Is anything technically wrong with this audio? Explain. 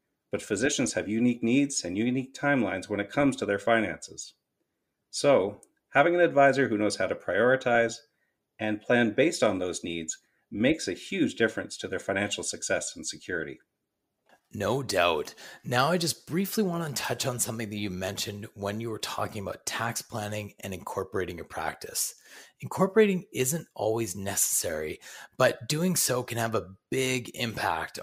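No, there are no technical faults.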